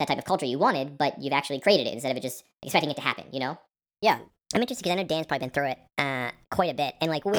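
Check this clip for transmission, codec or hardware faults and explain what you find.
One fault runs through the whole speech clip: wrong sample rate. The audio is played at a higher rate than it was captured at, with no conversion. The 1.38 speed-up and 5.55-semitone pitch rise fit 32 kHz material played at 44.1 kHz, so the voice sounds high, chipmunk-like and hurried.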